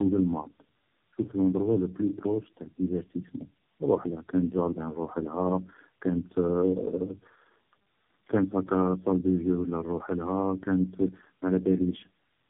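The speech passed through several low-rate speech codecs in a row, which is tandem speech coding: each border decoded and re-encoded it, so every coder worked on the last one's damage. Throughout, the speech sounds rough, muffled and warbly, with nothing above 3.8 kHz.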